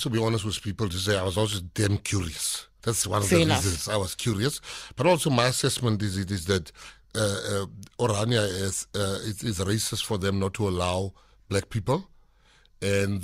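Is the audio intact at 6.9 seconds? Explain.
No. At 6.89 s, just after "is it is that", compressed frames are skipped: roughly one frame, consistent with a 20 ms frame length, never plays, so the audio jumps ahead about 20 ms.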